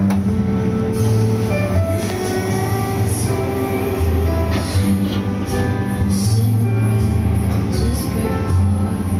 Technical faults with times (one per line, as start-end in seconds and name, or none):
0.00-9.20 gain pumping